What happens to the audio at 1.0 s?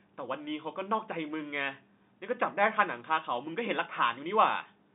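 Nothing goes wrong at 1.0 s: the speech comes through intact at that point, carried in the narrow telephone band of G.711 coding without any audible fault.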